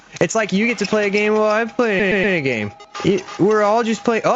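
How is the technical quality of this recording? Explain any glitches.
The recording has one glitch, repeated frames, from 1.99 to 2.35 s. A 120 ms block of compressed audio was written or delivered more than once, which suggests a run of roughly six frames, so the decoder played it three extra times. You hear a short stutter: the same fragment loops back-to-back. The repetition adds 360 ms to the audio's length.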